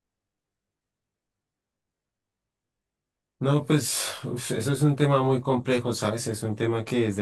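Channel delay with comb filtering runs throughout the speech. One channel lags by roughly 20 ms before the mono sum, cutting evenly spaced notches from around 30 Hz upward. The result sounds rough and slightly doubled.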